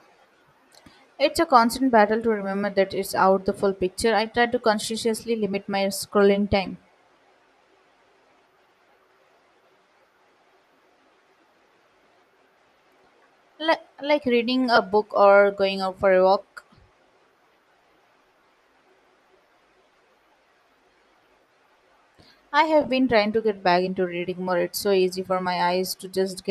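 At 6.66 s, after "consciously limit my scrolling", 14.76–14.78 s, between "like reading" and "book or going out", and 22.81–22.89 s, before "been trying to get", lost LE Audio frames leave brief noisy smears. The decoder refilled each gap with the previous spectrum under randomised signs. Gaps total 7.5, 15 and 30 ms, the last scattered over 75 ms, fitting 7.5 ms frames on a likely LC3 link.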